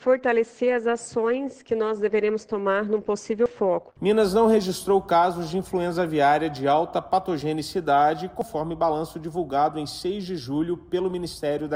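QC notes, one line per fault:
0.0 to 3.96 s, adaptive stream starting at a low bitrate: the opening has missing or synthetic-sounding treble and heavier codec artefacts, then clears suddenly with no gap. This fits a player starting near 16 kbit/s Opus and stepping up to about 64 kbit/s.
3.46 s and 8.41 s, audio missing between chunks: two brief skips, each losing roughly 40 ms, with both sides joined directly and no silence between. Spaced about 5 s apart, they point to a likely cause in chunked recording or processing.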